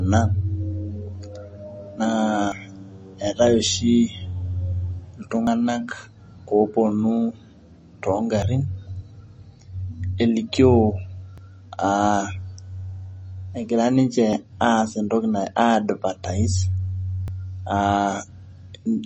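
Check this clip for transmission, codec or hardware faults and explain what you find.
Two problems turn up in this speech.

MP3 compression runs the whole way through: nothing above 8.3 kHz, plus a watery, swirly smear, likely from a low-bitrate encode around 32 kbps.

Audio missing between chunks shows up at 2.52, 5.47, 8.42, 11.38, 14.33 (just before "aas entoki") and 17.28 s. That's roughly 50 ms skipped every 3 s, likely lost at chunk boundaries.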